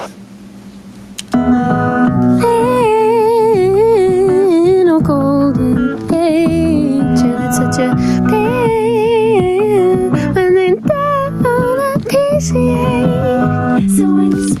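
Gain pumping runs throughout: the gain swings about 15 dB, pulled down on each loud sound, likely from excessive gain into a fast limiter, giving a flattened, breathing waveform envelope.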